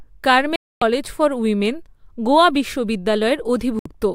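A speech clip with two digital broadcast dropouts. The sound mutes abruptly from 0.56 to 0.82 s, about a quarter second, and returns just before "ফর উইমেন গোয়া". A shorter hole follows at 3.79 to 3.86 s, lasting 64 ms. In both cases the receiver lost the signal or rejected corrupted frames, then muted until clean frames arrived. The gap lengths fit whole 32 ms frames. Whatever was broadcast during those gaps is gone.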